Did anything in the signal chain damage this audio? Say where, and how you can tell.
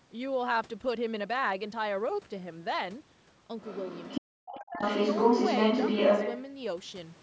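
Yes, both problems sit in the call processing stage. The first is the other side's voice leaking through. From 3.59 to 4.21 s a second voice sits roughly 10 dB under the talker. From 4.46 to 6.41 s it returns stronger, about 5 dB louder than the near speech. The likely cause is a loudspeaker playing the far end into the microphone while the echo canceller failed to subtract that path, so the residual passed through into the send signal.

The second is speech suppressed in double talk, from 4.21 to 4.82 s, right as the far-end voice overlaps. The talker's level collapses by around 40 dB at its deepest, and about half a second of speech is pushed down in total. The likely mechanism is the echo canceller's suppressor. With both sides active it could not tell near speech from echo, so it attenuated everything. The send band, which tops out near 8 kHz, does not account for these drops.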